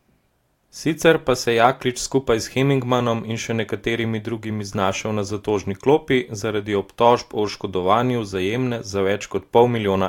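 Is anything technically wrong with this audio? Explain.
No, nothing technically wrong turns up anywhere in this speech recording, so there's nothing here to flag.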